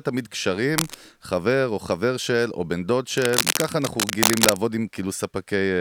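Cable scratch noise sounds at 0.77 to 0.94 s, a little below the speech level, and again at 3.16 to 4.64 s, about as loud as the speech. It is a dense, uneven rustle, likely from a worn cable or connector shifting and rapidly changing its contact resistance.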